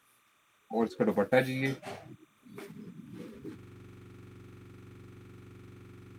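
From the first moment to the last, a faint chirping warble sits well below the sound. That is timecode bleed: linear timecode from an adjacent track or cable leaking in, its square wave flipping between pitches around 1 kHz and 2 kHz as it encodes frames at 29.97 per second. On a spectrogram it shows as two thin horizontal bands near those frequencies, with the broadband edges of the square wave smeared faintly above them.

At 3.59 s the audio seizes into a system hang loop that lasts to the end. The host or driver stopped feeding new data while the hardware kept replaying the same ring buffer, so one 42.67 ms slice repeats exactly, which fits a 2048-sample buffer. At 23.4 repeats per second it comes across as a harsh, rapid machine-gun stutter. The waveform shows one identical block tiled end to end, and the spectrogram shows rigid vertical striping at that interval.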